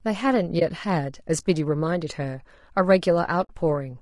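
Speech runs throughout with plainly audible codec damage: a rough, grainy texture, noise filling the gaps between harmonics and a thin, somewhat synthetic top band, likely from low-delay AAC compression (AAC-ELD) at a low rate, which fits roughly 32 kbps. There is AAC frame loss with muting in two places: a 20 ms hole from 0.59 to 0.62 s and a 60 ms hole from 3.43 to 3.50 s. In each, the decoder zeroed the missing spectrum, and the overlapping windows fade the sound out and back in rather than cutting it sharply.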